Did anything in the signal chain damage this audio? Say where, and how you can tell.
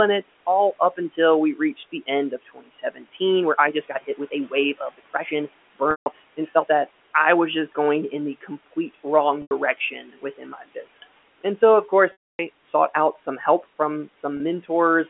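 Yes. The call processing damaged it: the noise suppressor cut speech at 2.31–3.21 s, 3.73–4.53 s, 4.74–5.32 s and 9.91–11.04 s, pulling soft syllables down by about 15 to 17 dB. The sound turns faint rather than breaking, which separates this from packet loss.

The network also caused packet loss with pitch repetition at 5.91 s (150 ms), 9.42 s (90 ms), 12.12 s (270 ms) and 14.37 s (30 ms), which fits 30 ms packets. The short gaps hold a buzzy note, and the longest fades to silence before a brief cross-fade. Unlike suppressor dips, these repeat the sound instead of lowering it.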